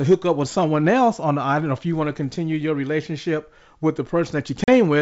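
Speech carried over G.722 wideband coding suffers packet loss on an ADPCM call. A couple of packets drop out, leaving a hard-edged silent gap of about 40 ms from 4.64 to 4.69 s. The decoder's predictor and step size then lag the sender's, so the speech comes back slightly distorted before it settles.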